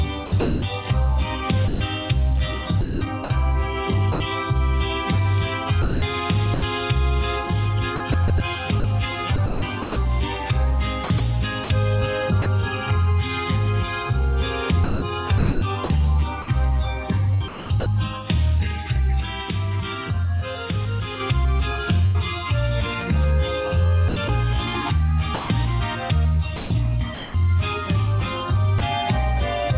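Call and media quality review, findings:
Sound chopped by the voice detector, 0.26–4.2 s, 5.82–6.62 s, 7.96–12.46 s, 14.84–17.86 s, 24.08–27.34 s: sound repeatedly swapped for flat synthetic noise, likely sender VAD toggling, roughly 0.3–0.9 s replaced per stretch.

Sudden gain jump, 19.20 s: level and background drop together by about 4 dB with no ramp, holding until 21.2 s; likely an unramped digital gain step.

Burst of packet loss, 22.06–22.16 s: about 80 ms missing, receiver concealment stretches the last sound and fades it before audio resumes further on.

Sound dropped by the voice detector, 28.78 s: a 20 ms slice of sound replaced by comfort noise, likely the VAD treating it as background. Band ends at 4 kHz throughout, consistent with a narrowband call codec.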